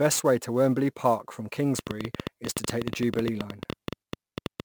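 From the start, sample clock jitter roughens the speech: an unsteady converter clock, wandering on the order of 10 microseconds, mistimes each sample, leaving hiss about 20 dB below the signal that swells on loud, bright syllables. A spectrogram shows broadband haze tracking the speech energy, absent in pauses.

From 1.79 s to 4.61 s a train of clicks ticks over everything, pauses included: around thirty similar pulses at about 10.7 per second, irregularly spaced and well above the speech level, likely from nearby equipment interference. The waveform shows sharp spikes; the spectrogram shows thin vertical lines.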